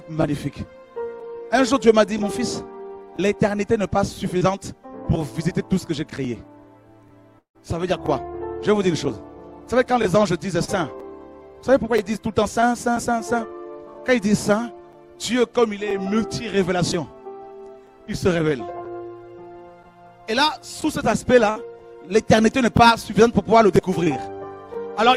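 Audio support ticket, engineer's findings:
Short concealed packet loss at 4.37–4.43 s, 10.65–10.70 s, 12.60–12.64 s and 24.04–24.08 s. Brief smear or wobble each time. Receiver jitter buffer and decoder concealment. Roughly 20 to 40 ms of audio missing per event. Decoder extended the preceding sound and blended back in.

Long network dropout at 7.39–7.57 s. Sound continues as a fading buzz or hiss, then about 100 ms of near silence before the audio returns further on. About 160 ms never played. Likely cause: network path interruption, with decoder concealment fading out over the gap.

Burst of packet loss at 21.50–21.58 s. Held buzz or fading hiss, then audio resumes. Network and jitter buffer. Roughly 60 ms of consecutive packets lost or late. Concealment repeated the last sound, attenuating it over the gap. The intervening material is missing.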